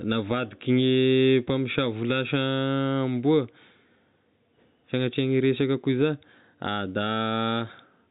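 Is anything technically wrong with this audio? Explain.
No, nothing here is technically wrong; it's speech carried over ordinary G.711 telephone coding, so it has the usual phone-line band limit with nothing above 4 kHz.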